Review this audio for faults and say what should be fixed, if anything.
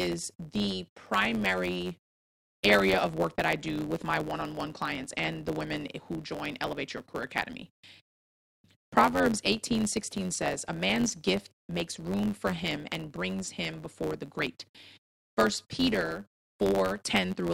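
A steady buzz at 91.9 Hz sits under the speech the whole way through, and it runs 1.07 times fast with its timbre intact. That's a block size mismatch (truncated): blocks that fit a 512-sample size get their tails chopped by the next stage, once per block. Prevent it by making both stages agree on one block size.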